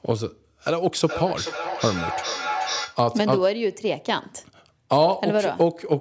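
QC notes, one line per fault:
0.69–3.06 s, feedback echo between two devices: the speech comes back about every 0.4 s, at worst about 8 dB under the original. Another device nearby is playing the call aloud, this mic picks it up again, and its echo canceller only removes its own playback.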